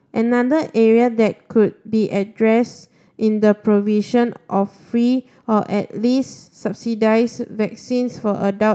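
Nothing stood out on listening to this speech recording, which came through a call path whose band limit sits around 8 kHz.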